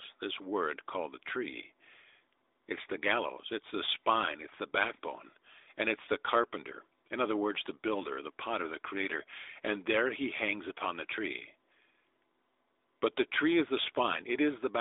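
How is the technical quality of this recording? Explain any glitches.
The technical quality of this recording holds up, with no glitches to explain.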